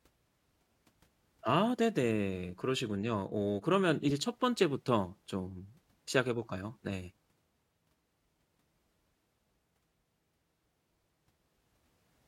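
At 4.09 to 4.11 s the speech carries a corrupt frame decoded. Flipped bits in a single compressed frame were decoded anyway. Misread codes put energy at wrong frequencies for that frame. It sounds like a brief chirp or blip, peaking around -30 dBFS.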